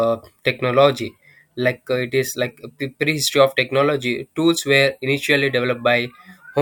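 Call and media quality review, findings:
Sample clock jitter, whole clip. Faint hiss and grit riding on the speech, worst on loud and bright sounds like sibilants, gone in the pauses. Probable component: converter clock. Timing wobble around a microsecond rms; error tracks waveform slope, sitting roughly 40 dB under the signal.

Worth checking the ADC/DAC clock source or PLL lock on that path, since the noise only shows up where the speech does.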